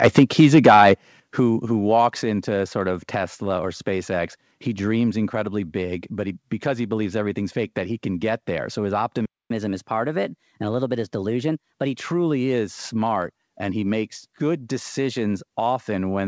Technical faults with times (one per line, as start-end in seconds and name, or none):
0.03-0.93 microphone overload
0.19 microphone volume stepped down
1.20 microphone volume stepped down
9.25-9.50 playback stall
9.50-11.98 catch-up at higher speed